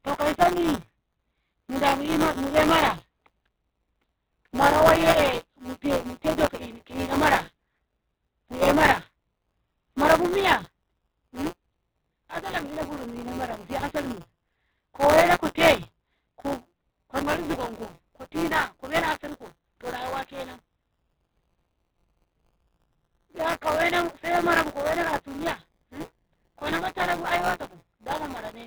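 Opus compression runs throughout the speech: nothing reaches above about 4 kHz, and the sound is heavily grainy, rough and noisy, which points to a very low bitrate, around 8 kbps. The likely cause is Opus in its music mode filling starved bands with folded or noise-like content.

Buffer tearing, also present from start to finish, adds a robotic buzz at 172 Hz, which fits a 256-sample buffer. Writer and reader have slipped, so about a tenth of each period replays audio roughly 20 ms old, with hard joins that rattle whenever speech is present.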